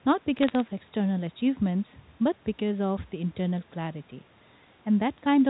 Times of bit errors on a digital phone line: 0.39-0.60

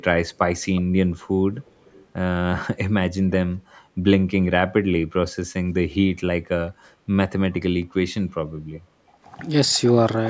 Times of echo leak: 0.75-0.82, 1.61-2.06, 8.74-8.79

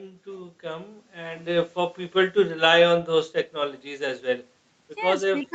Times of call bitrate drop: none

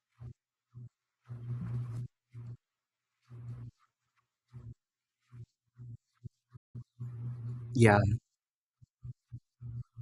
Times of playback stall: 6.56-6.76

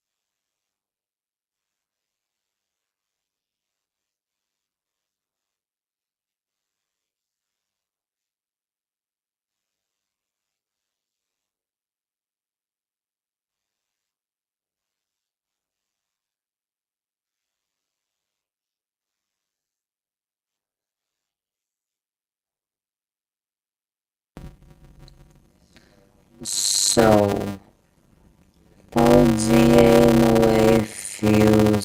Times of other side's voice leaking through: none

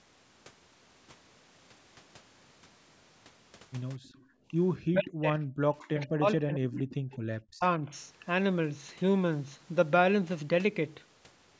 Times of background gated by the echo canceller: 4.27-4.48

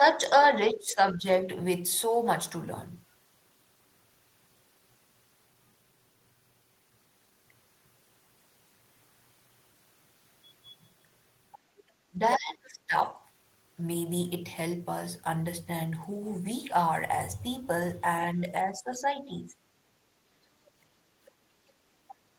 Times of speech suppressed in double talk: 0.00-1.47, 12.10-13.17, 18.32-19.58

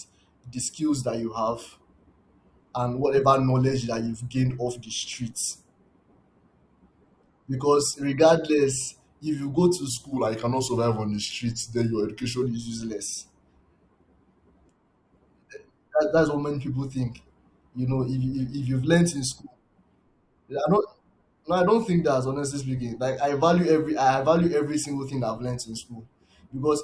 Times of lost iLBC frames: none

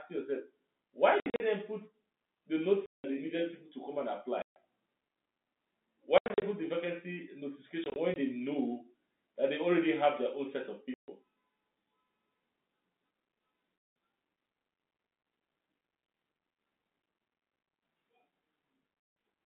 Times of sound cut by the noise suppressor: none

